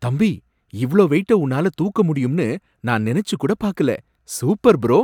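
No technical faults are audible.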